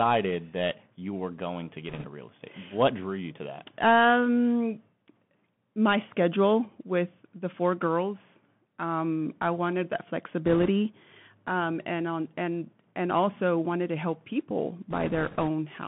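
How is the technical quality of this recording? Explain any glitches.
The quality is limited by a narrowband headset link throughout, with three short bursts of noise from errors on that link.

Throughout, the sound passes through a Bluetooth CVSD headset codec, which fits a 64 kbps CVSD link. Its one-bit delta coding keeps only about 150 Hz to 3.4 kHz, producing a muffled, hissy sound with scratchy sibilants.

Bit errors on a Bluetooth voice link occur three times: from 1.89 to 2.06 s, between "you were going to" and "real estate"; from 10.45 to 10.68 s, after "I wanted that"; and from 14.90 to 15.49 s, after "wanted to help people". Flipped bits, roughly 2 to 3 percent, each nudge the decoded level slightly and fade quickly. They add a rushing crackle rather than sharp clicks.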